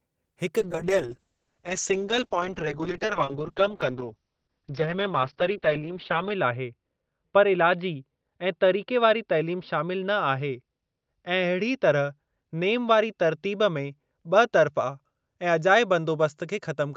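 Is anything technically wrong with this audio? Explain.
Yes. A call bitrate drop sets in at 0.61 s and lasts to the end of the clip. The call's bandwidth estimate fell, so the encoder was pushed to spend far fewer bits. The coarseness suggests a fall from around 32 kbps to about 7 kbps, bottoming out for roughly 5.7 s. At that rate the codec discards detail and trims the top end from 20 kHz to 6 kHz, so the speech turns rough, watery and muffled and never recovers.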